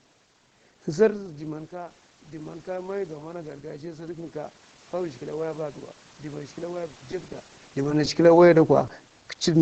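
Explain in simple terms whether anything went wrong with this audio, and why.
From about 1.16 to 4.1 s, the voice and the background noise grow louder together, a slow swell over roughly three seconds. This is automatic gain rising. Just before it, around 1 s, the talker seems to lean away from the microphone, so the sound reaching it drops. The call's automatic gain control hears that drop and gradually turns its own volume up to compensate, lifting the room noise along with the voice.

Between 6.88 and 7.34 s, and again between 7.83 and 8.30 s, the voice turns choppy, with tiny pieces dropping out. This is repeated packet loss. Small chunks of the call, each about a hundredth of a second, arrived too late or not at all. Each time, the receiver patched the hole by stretching the last bit of sound it had. Because the holes come in quick succession, those patches run together into a choppy texture.

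At about 8.87 to 8.89 s there is one tiny smear, much briefer than the earlier choppy stretches. This is a short concealed packet loss. About a hundredth of a second of audio never arrived, and the receiver filled the gap by continuing the sound just before it, then blended back into the real signal. A gap like this can blur a quick consonant.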